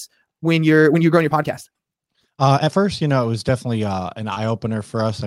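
Rushed speech runs from the start to 2.8 s, moving about 1.61 times faster than normal while the pitch stays put, then the pace drops abruptly. This time-stretched section was likely squeezed by software that dropped short slices to shorten it.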